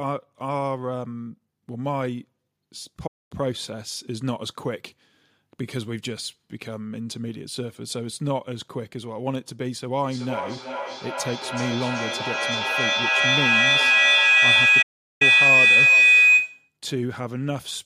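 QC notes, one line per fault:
3.07–3.32 s and 14.82–15.22 s, playback stall: the output goes fully silent for about 0.23 s, then about 0.38 s. The likely cause is the player running short of data or its thread being blocked. Unlike a packet dropout, the gap is long, clean and total. The second stall falls inside the howl and silences it too.
10.04–16.77 s, feedback howl: a tone around 3 kHz rises to about 11 dB above the speech, pulsing roughly every 0.4 s as the sound travels the loop from loudspeaker to microphone and back, gaining level on each pass. Unlike echo or room ringing, the repeats grow louder instead of dying away, and they narrow to one pitch. The howl keeps building until the loop is broken at 16.77 s.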